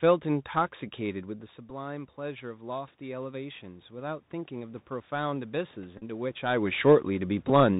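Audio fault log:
throughout: Bluetooth CVSD headset codec. One-bit up/down coding at 64 kHz with an adapting step leaves nothing above 4 kHz, plainly audible here as scratchy s sounds, granular hiss under the speech and distortion on loud high peaks. Unlike a packet repeat, it never stops or buzzes.
1.05 to 6.34 s: automatic gain rising. After the speech drops by about 13 dB around 1.0 s as the talker moves away, the gain control slowly adds about 8 dB, so voice and room noise swell together over several seconds. The talker's move is not a fault, while this rise is gradual.
1.70 s, 7.49 s: Bluetooth headset packet repeated. Short losses of 7.5 ms and 11.2 ms were filled by decoding the previous packet's bits again, giving a brief buzz near 267 Hz until good packets return.
5.98 to 6.03 s: Bluetooth headset packet repeated. About 30 ms was lost across a 37.5 ms stretch, with the longest run about 15 ms. 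Each repeat recurs every 3.75 ms, giving a brief buzz near 267 Hz that a single tick lacks.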